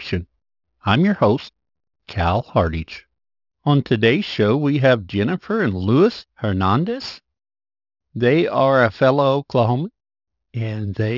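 Speech clip with aliasing throughout: content above 6 kHz folds back into the band as unrelated tones, leaving sibilants gritty and metallic and the spectrum running hard up to its edge. This points to downsampling to about 12 kHz without anti-alias filtering; the folded energy sits roughly 25 dB below the speech.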